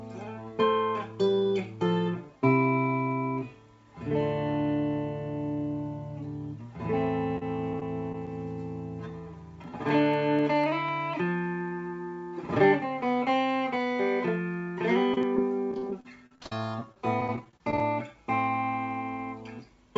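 From 7.37 to 8.28 s there is repeated packet loss (robotic sound). Short stretches of audio never arrived, and each hole was patched by extending the preceding sound. The result is a choppy texture with pieces missing. About 80 ms goes missing across the span, with the longest hole 30 ms, so roughly 9% of that span is concealed. On a spectrogram, brief smeared, frozen-looking blocks interrupt the normal detail. The waveform shows short repeated-looking segments where the gaps were filled.

Between 9.64 and 11.13 s come periodic USB or driver dropouts: about seven tiny skips, evenly spaced every 0.25 s. A blocked bus or driver caused each skip, dropping a tiny fraction of a millisecond of audio without filling the gap. They are heard as regular ticks over the signal. A waveform shows small discontinuities at a steady rhythm, and a spectrogram shows thin vertical broadband lines at the same 0.25 s spacing.

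The packet loss returns more heavily from 15.14 to 17.81 s. Many gaps, the longest 51 ms, remove about 460 ms in total, so around 17% of that stretch is concealed. The robotic, stuttering quality is stronger and more sustained here. The spectrogram shows frequent smeared or repeated slices breaking up the texture below the call path's 8 kHz ceiling.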